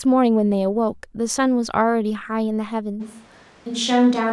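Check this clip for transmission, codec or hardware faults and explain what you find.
One fault is present. From 3.02 s to the end, the speech abruptly turns roomy and hollow with thinner bass, likely a switch to a distant microphone after the close one dropped out. Loudness stays about the same, but room noise rises to roughly 30 dB below the speech. A spectrogram would show weaker low frequencies, smeared reverberant tails and a raised noise floor between syllables, and the waveform's silent gaps fill in.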